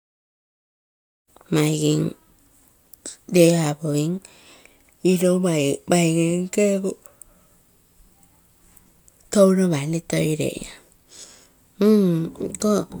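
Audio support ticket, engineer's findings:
Nothing stood out on listening to this speech recording, and the gentle fade-in near the start sounds like a deliberate edit.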